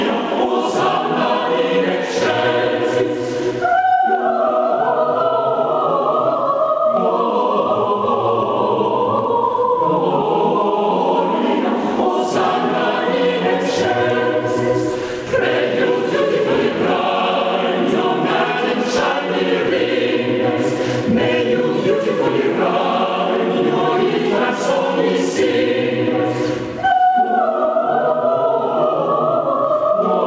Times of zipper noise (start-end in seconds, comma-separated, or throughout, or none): none